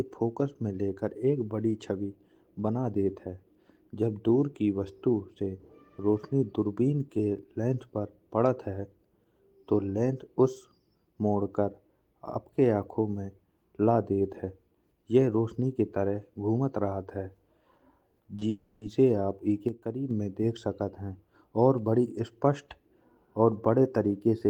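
It's a speech clip, and it runs into trouble just past 18 seconds. First come short concealed packet losses at about 18.23 s and then back to back from 18.35 to 18.43 s. Each is roughly 20 ms of audio that arrived too late, patched by stretching the previous sound, so you get quick smears. Right after, from 18.49 to 18.83 s, there's a longer gap of about 0.32 s, most likely a long network dropout. The receiver keeps extending the last sound as a fading fill the whole way, never dropping to silence, and the speech picks up again with that chunk simply gone. Then from 19.69 to 20.11 s, just before "में देख सकत है", the level abruptly falls about 6 dB, voice and background together. That's a sudden gain jump, likely a gain setting applied instantly instead of ramped.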